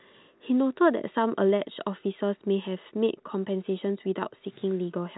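The speech has the narrow band of G.711 telephone coding, with nothing above about 3.9 kHz and only the faint, level-following quantisation hiss of an 8-bit logarithmic scale, which fits a standard 64 kbps mu-law line, and nothing in the signal stands out as having gone wrong.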